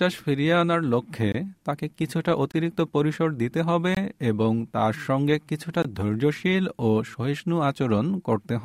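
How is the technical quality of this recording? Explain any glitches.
Four brief dropouts interrupt the speech, each a block of digital silence about 21 ms long, at 1.32, 2.52, 3.95 and 5.82 s. Each is heard as a short hole: the sound stops abruptly and resumes with no fade. The equal lengths, which fit a 1024-sample buffer, point to the program failing to fill its output buffer in time, so a full block of zeros was played in place of the audio.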